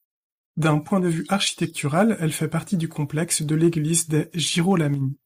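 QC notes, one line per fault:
3.34 to 3.98 s, hard clipping: right after "elle fait partie du", the loud parts of the speech take on a rough, crackly edge that comes and goes with the peaks for about 0.65 s. The level there runs past what a stage in the chain can pass by about 2 dB, so the tops of the waveform are sliced flat. Those squared-off peaks add harmonics high up the spectrum, which is the brittle crackle heard on the loudest syllables.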